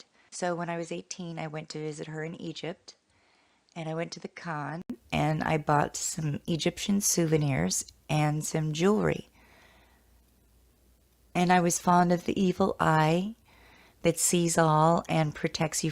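The recording most likely began on a poorer input device, so the first 4.90 s came through a narrower, weaker path: nothing reaches above 9.8 kHz, the level sits roughly 10 dB lower, and a faint noise bed of its own lies well beneath the signal. The sound is dull and boxy until 4.90 s, when a short gap of about 80 ms marks the input switch to a better device and the audio abruptly opens up and grows louder.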